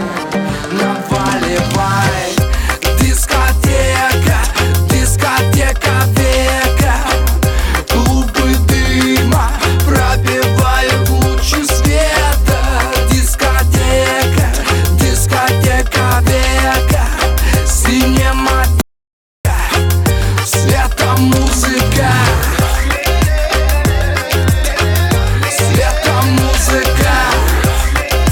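At 18.81 s the input feed was likely interrupted, by a dropped connection or a brief mute, while the recorder kept writing silence. The result is an audio dropout to silence lasting about 0.64 s, until 19.45 s: the sound stops abruptly, with no room tone in the gap, and resumes mid-flow.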